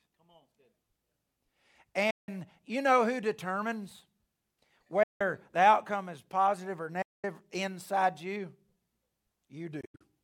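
Speech cuts to silence four times, the likely result of Bluetooth dropout: 2.10–2.29 s before "you know who determines", 5.03–5.21 s before "the outcome is positive", 7.02–7.24 s between "outcome is positive or" and "inside you", and 9.81–10.03 s in broken gaps. Speech resumes further on, not where it stopped, which distinguishes it from buffer stalls.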